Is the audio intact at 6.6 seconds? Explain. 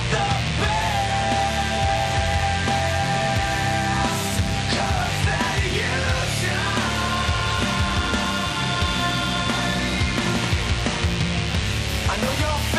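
No, at 6.6 seconds the audio is not intact: a DECT cordless phone buzz runs through the whole clip, so it is present at that moment too. A nearby DECT handset or base station transmits a short radio burst every 10 ms, and the audio circuitry rectifies those bursts into the signal path. The result is a steady, thin buzz at 100 Hz with a dense stack of harmonics, sitting roughly 10 dB below the wanted sound.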